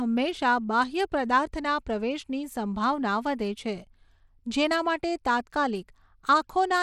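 Bluetooth SBC compression runs throughout, most likely a small bit pool in the range of 96 kbps. The weak upper sub-bands get too few bits, leaving plainly audible grit over the speech.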